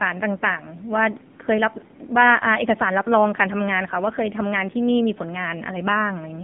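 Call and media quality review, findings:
AMR narrowband mobile codec, full clip, 0 to 6.4 s. Speech band-limited to 150 Hz to 3.5 kHz, nothing above 3.5 kHz. Heavy buzzy, synthetic timbre, consistent with a low-rate vocal-tract model with sparse pulse excitation per 5 ms. Damage level points to AMR-NB around 6.7 kbps. Probable component: mobile leg of the call path or a transcoding stage.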